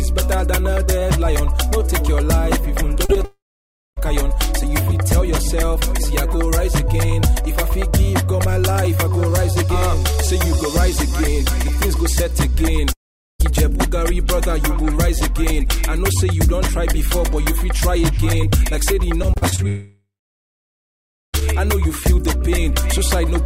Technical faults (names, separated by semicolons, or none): short concealed packet loss; long network dropout; scattered short gaps